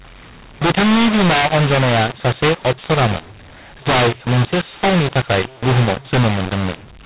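From start to finish the speech carries a mu-law and A-law mix-up: the telephone stream was written as A-law but decoded as mu-law. Each 8-bit code lands on the wrong step of the other logarithmic curve, so loud and soft samples are misscaled, giving a harsh, gritty distortion, and near-silent samples are lifted so the pauses hiss. The band still stops at 4 kHz, as 8 kHz G.711 should. Unlike clipping, the damage persists in quiet passages and pauses.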